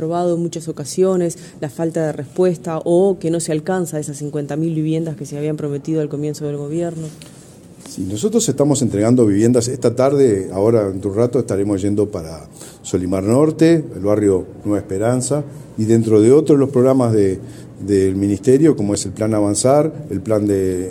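Right near the end, at 18.95 s, there's a repeated buffer. The next chunk of audio didn't show up in time, so the device replayed the one it had just played. That piece lasts only about 1.45 ms, which fits a 64-sample buffer, and it plays one extra time with hard joins on either side. Because it's so tiny, you hear it as a quick click, not a stutter, and essentially no audio goes missing.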